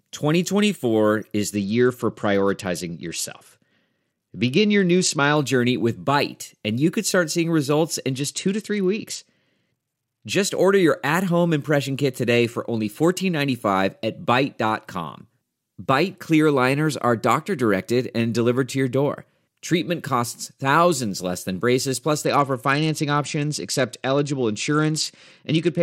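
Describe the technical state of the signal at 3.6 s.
At 3.6 s you're right in the middle of a Bluetooth SBC bit pool drop, running from 1.55 to 5.37 s and clearing just before "journey with". The link got squeezed, and the sound points to the bit pool falling from 28 to 10, around 84 kbps. With that little to spend, the top sub-bands get almost nothing and the rest are coarsely quantised, so the speech goes dull up top with a gritty noise riding underneath.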